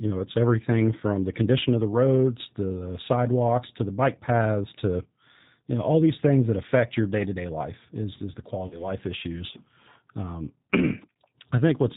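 Throughout, the speech has passed through a G.729 codec, and the sound fits its 8 kbit/s rate. Each 10 ms frame is rebuilt from a vocal tract filter, a pitch predictor and a few pulses. Nothing above 4 kHz survives, and the voice is plainly rough and synthetic.

From 8.67 to 8.87 s, there is VoIP packet loss concealed by the speech codec. About 40 ms of audio went missing, which fits two lost packets. The decoder extended its last pitch and filter at falling gain, giving a brief, fading smear, and the voice stays weakened until 8.87 s.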